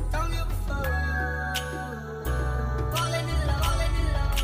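Doubled audio track from 2.27 s to the end: a second, equally loud copy trails about 0.7 s behind, starting abruptly, likely from an edit misaligning two copies.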